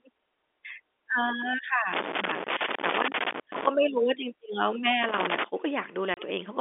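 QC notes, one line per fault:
1.93 to 3.69 s and 5.03 to 5.44 s, loose connector crackle. Irregular bursts of scratchy crackle break up the speech. A worn or dirty contact keeps making and breaking as it moves. That chops the signal, and the sudden steps add pops.
6.14 to 6.17 s, packet loss filled with silence. The speech drops out for 30 ms and is replaced by dead silence. The hole fits three lost 10 ms packets, heard over the band-limited telephone line.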